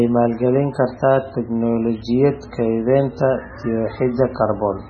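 Heavy MP3 compression runs through the whole of this speech recording, from start to end. Nothing is present above about 8.1 kHz, so the top of the sound is flat and dull, and the sibilants have a watery, swirling quality with metallic chirps on s sounds. The likely cause is a very low bitrate, which fits something around 16 kbps. On a spectrogram there is a hard horizontal ceiling near 8.1 kHz, with speckled gaps below it that flicker from frame to frame.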